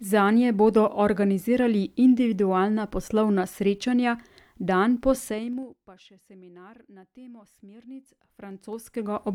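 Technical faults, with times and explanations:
5.22–5.8 s, zipper noise: after "poslovna srečanja dan po", the level drops about 25 dB in unsmoothed 2 dB steps, roughly twenty per second. Each step clicks.
8.02–9.34 s, zipper noise: after "še seminar na temo", the level climbs about 25 dB in 2 dB jumps, around ten per second. It ticks audibly.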